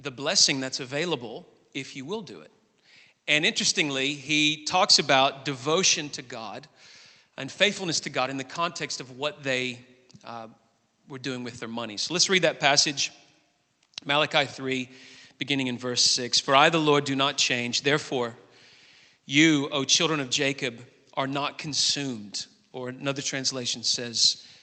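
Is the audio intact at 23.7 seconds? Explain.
Yes, the audio at 23.7 seconds is intact, with no dropout, glitch or other fault at that moment.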